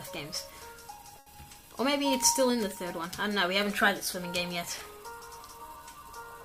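There's a short stall from a late packet at about 1.19 s, running to roughly 1.29 s. A packet didn't turn up on time, the jitter buffer ran dry, and the receiver held the last bit of sound for about 70 ms until it arrived, then carried on from exactly where it left off. Nothing gets lost, but you hear that sound hang a touch too long, with a faint buzz or dip, and everything after it lands about 70 ms later.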